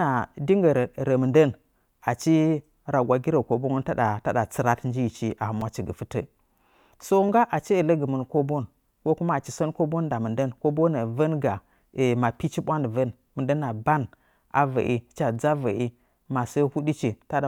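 Speech, with two repeated-buffer glitches, at 5.61 s and 7.27 s. New audio arrived late, so the last chunk played again: once at 5.61 s, three more times at 7.27 s. The repeats are tiny, pointing to a buffer of about 5 ms, so they come through as brief clicks or buzz rather than a stutter.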